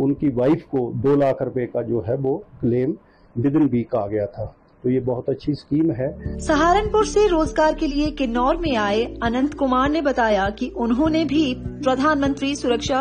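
Adaptive stream at a lower bitrate from 3.17 s to the end: quality drops suddenly without a gap, codec artefacts rise and nothing remains above 9.7 kHz, pointing to roughly 32 kbit/s AAC.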